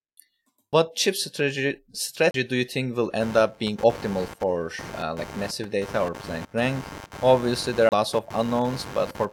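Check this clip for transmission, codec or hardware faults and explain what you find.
Two kinds of hardware fault are present: two CD skips and a stretch of computer activity noise.

The first CD skip falls at 2.31 to 2.34 s, between "what chip strategy" and "do you think will". The second comes at 7.89 to 7.92 s. A knock or a flaw on the disc throws the laser onto another turn of the spiral. The player mutes for around 30 ms, then resumes from the new spot. Each one sounds like a tick or short gap followed by an abrupt jump in the speech.

Computer activity noise starts at 3.20 s, just after "do you think will", and runs to the end of the clip. Load changes in the computer shift the ground that the audio circuit shares. That disturbance lands directly in the signal. Here it shows up as a pulse train at roughly 100 Hz, about 15 dB below the speech. It tracks the machine's activity, not the sound itself.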